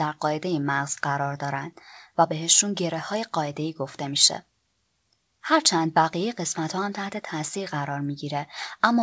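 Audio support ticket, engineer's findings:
No faults found in recording.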